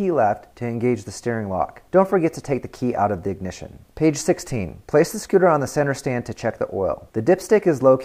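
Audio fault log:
No technical faults can be heard anywhere in the signal.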